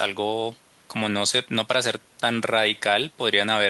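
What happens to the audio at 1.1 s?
Nothing goes wrong at 1.1 s; the speech there is intact, with no dropout, click, distortion or other fault to be heard.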